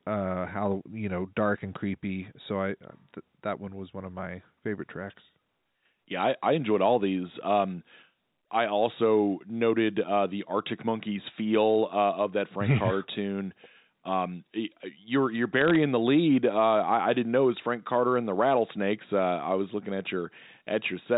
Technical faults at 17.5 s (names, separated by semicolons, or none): none